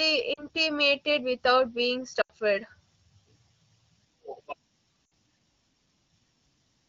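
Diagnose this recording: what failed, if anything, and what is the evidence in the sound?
Lost AMR speech frames on the radio link, caught at the decoder stage. Around 0.33 to 0.47 s, 2.21 to 2.32 s and 5.06 to 5.11 s the speech briefly smears into a held, buzzy tone that sags in level. The gaps, about 40, 80 and 60 ms, fit runs of two to four 20 ms frames. Each damaged frame failed its check, so the decoder repeated the last good pitch and vocal tract settings at falling gain. The stretched-then-fading shape sets this apart from a buffer dropout, which cuts to hard silence with clicks. The wideband codec carrying it adds only light coding texture, consistent with a rate near 12.65 kbit/s.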